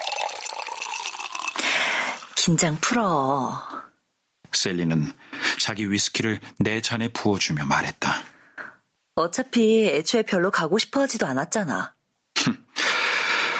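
From start to finish there's gain pumping. The level swings by something like 25 dB, clamping down on each loud moment and creeping back up after, so loud and soft parts sit squashed together. The likely cause is mic gain set far too high, feeding a fast limiter.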